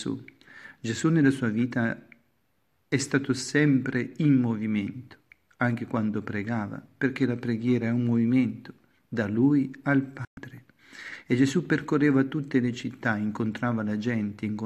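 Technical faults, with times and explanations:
10.25 to 10.38 s, digital broadcast dropout: the receiver muted for about 120 ms, which fits roughly five failed frames, fading out over 3 ms and back in; the waveform shows a flat gap, the spectrogram a clean vertical blank band.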